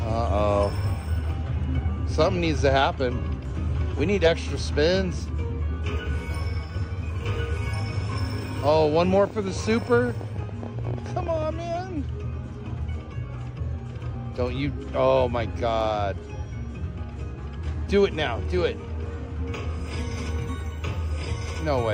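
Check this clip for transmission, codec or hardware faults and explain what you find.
One fault is present. From 8.80 to 11.43 s there is a train of clicks: irregular popping, about 13 per second and around forty in all, peaking a few dB above the signal. The likely cause is nearby interference or a faulty connection or power supply.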